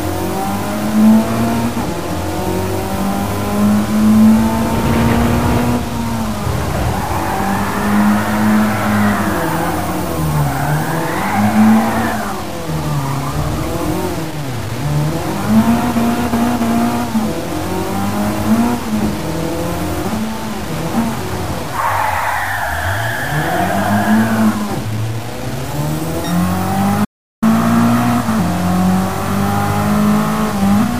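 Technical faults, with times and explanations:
Throughout, low bit depth without dither: harsh, grainy distortion tracks the sound, with error only about 15 dB down, likely from undithered truncation fitting around 5 bits.
27.05–27.42 s, audio dropout to silence: sound cuts to dead digital silence with no room tone for 0.37 s, likely input lost while zeros were written.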